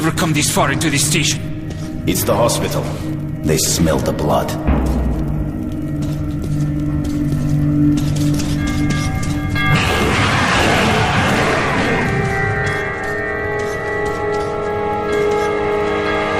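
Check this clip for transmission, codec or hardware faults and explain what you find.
Nothing stood out on listening to the clip as a transmission, codec or hardware problem.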